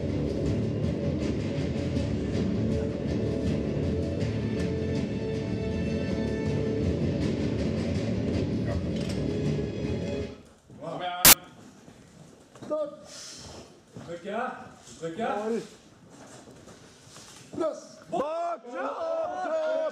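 Samples built from the wrong bytes, from 11.25 to 11.33 s: the reader misassembles each sample's bytes, so the rapidly changing low-order bits land in the high positions and dominate the value. For those 80 ms the sound gives way to a loud burst of harsh broadband noise.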